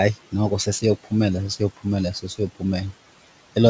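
A short speech recording carries noise suppressor artifacts from start to finish. The suppressor pulls the room's steady background down by about 17 dB in the gaps, so the noise dips between phrases and swells back under the voice. From 2.14 to 2.63 s, the suppressor mistakes part of the speech itself for noise and turns it down, by about 18 dB at the deepest point. Around 150 ms of speech in that stretch sounds swallowed and faint. The room noise sits roughly 19 dB below the speech. The audio stops at 8 kHz, which fits a wideband call codec such as G.722.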